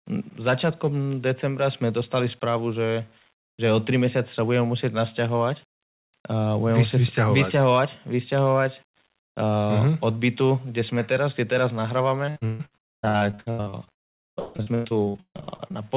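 Throughout the speech, the samples were likely rounded to 8 bits without dither, so quiet passages turn gritty, with grainy distortion about 35 dB below the speech. From 12.26 s to 15.85 s, repeated packet loss opens dozens of gaps, the longest 154 ms. About half that stretch is patched by extending earlier sound, which makes it choppy and robotic. The narrowband call audio stops at 4 kHz.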